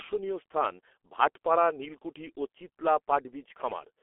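Speech, heard throughout through G.723.1 codec coding at a rate that fits a budget of about 6 kbit/s. Nothing survives above 3.8 kHz, and the band sits in the 300 Hz to 3.4 kHz telephone range. The long 30 ms frames and the slow model updates leave the speech muffled and hoarse, with smeared consonants.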